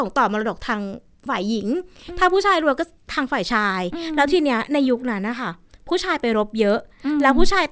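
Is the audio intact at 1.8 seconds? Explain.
No. At 1.8 seconds the speech carries the same fault that runs through the whole clip: a resampler restarted on every block. The audio was converted block by block, in 100 ms pieces. This likely fits a 24 kHz to 16 kHz conversion. Each block was filtered with no knowledge of its neighbours. So every block edge holds a small error. You hear steady ticks at 10 Hz, present only while there is signal.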